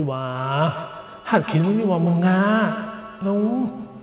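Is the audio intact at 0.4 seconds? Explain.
No. From 0.36 s to the end of the clip, each stretch of speech comes back as a thin, ringing copy roughly every 150 ms, with the repeats peaking about 10 dB below the speech itself. This is feedback echo between two devices: a second device in the same room plays back what the first microphone sent, and that microphone captures it again. Its echo canceller cannot remove it because the sound is coming from another loudspeaker.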